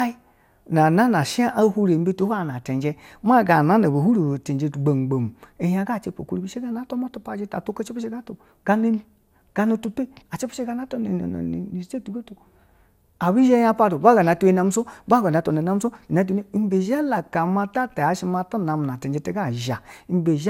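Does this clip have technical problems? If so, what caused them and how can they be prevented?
Yes. Generation loss runs throughout the speech, giving a swirly, hollow, smeared sound with blurred consonant attacks and nothing above 16.7 kHz. This likely comes from around seven rounds of lossy decoding and re-encoding. Each round quantised afresh on a shifted frame grid, so the noise accumulated. The sound fits MP2 at about 128 kbit/s. On a spectrogram this shows as a hard ceiling, and on the waveform the transients look softened. To prevent it, keep a lossless master for all editing and encode to a lossy format only once, at the final step.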